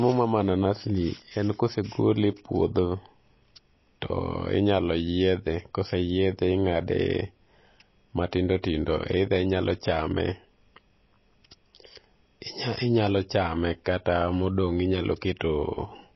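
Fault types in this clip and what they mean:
MP3 compression: The sound is cut off sharply above 5.8 kHz for the whole clip, and the remaining band has a watery, swirling texture where weak frequency components flicker in and out between frames. Sibilants turn chirpy and metallic. This is likely low-bitrate MP3 encoding, with the damage plainly audible and consistent with a rate near 24 kbps. Unlike a plain low-pass filter, the cutoff comes with this unstable, bubbling grain, not just dullness.
Pre-echo: At 8.62 s a brief hiss of about 16 ms runs just ahead of a sharp attack, and that onset sounds softened and smeared. The codec spread its quantisation noise across a whole block, so noise meant for the loud attack also filled the quiet moment before it. It differs from a click or dropout because it is a smeared noise ahead of the onset, tied to the attack, not a sudden break.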